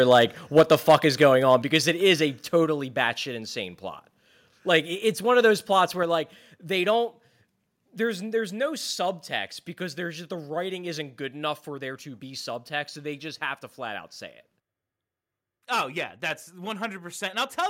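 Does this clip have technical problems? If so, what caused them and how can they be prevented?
Yes. The most likely cause of the first problem is that the microphone input was set too high, so the loudest peaks went past the converter's ceiling. This microphone overload cuts the tops off the waveform, giving a harsh, crackly edge at 0.11–0.22 s (about 2 dB over), 0.57–1.25 s (about 7 dB over, the worst stretch) and 1.53–1.77 s (about 2 dB over, just before "it is a"). Only a small share of samples is flattened each time. Setting the input gain lower, so peaks stay well below full scale, would prevent it.

The second problem is that the call software apparently reacted to the loud, clipping input by lowering the device's input volume in single steps. Each microphone volume stepped down event makes the sound and its background drop abruptly: at 0.61 s by about 2 dB, at 1.62 s by about 4 dB, at 2.64 s between "it is a" and "batshit insane plot" by about 3 dB, and at 6.03 s between "one of those plots" and "like they" by about 4 dB. 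The first two steps fall inside the clipped passages. Turning off automatic microphone gain adjustment and fixing a sensible level beforehand would prevent these jumps.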